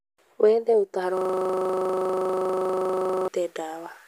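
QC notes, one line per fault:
1.17–3.28 s, system hang loop: the system froze while the sound hardware kept replaying one 40 ms slice of speech, about fifty times. Repeating at 25 Hz, it becomes a rough, rapid buzz in place of the speech, which fits a stalled 40 ms ring buffer.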